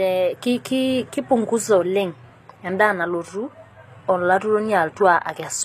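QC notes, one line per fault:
throughout, HE-AAC compression: the speech has likely been through HE-AAC at a low rate, which fits roughly 24 kbps. The encoder keeps only the lower spectrum and synthesises the treble by copying lower bands upward under a coarse envelope, so the top end stays bright but is not the original. Harmonics fail to line up across the crossover, s sounds come out gritty and metallic, and nothing remains above 14.9 kHz.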